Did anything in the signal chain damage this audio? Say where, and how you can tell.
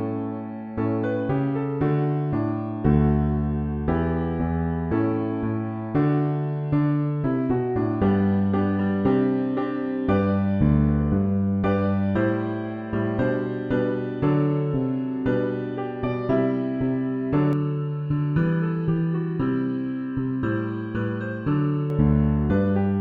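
Yes: channel delay (comb filtering), 17.53 to 21.90 s. At the mono fold-down, one channel arrives under a millisecond late, carving evenly spaced notches from about 700 Hz and hollowing the sound.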